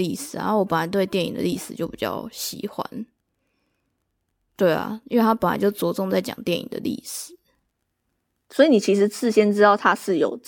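No technical faults are audible.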